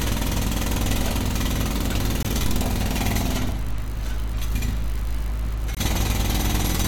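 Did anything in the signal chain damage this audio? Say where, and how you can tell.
Yes, at the codec stage: corrupt frame muted. Abrupt silent gaps run from 2.23 to 2.27 s and from 5.75 to 5.78 s, each about 35 ms, which fits a single frame. The decoder rejected the damaged frame, the player substituted silence, and timing stayed intact.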